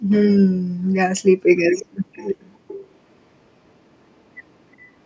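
Echo leak occurs at 0.1–0.3 s, 1.76–1.86 s and 2.13–2.92 s. A copy of the speech trails it by 362 ms. The copy is nearly as loud in the first burst and faint later. This is likely a loudspeaker-side echo canceller passing returned sound.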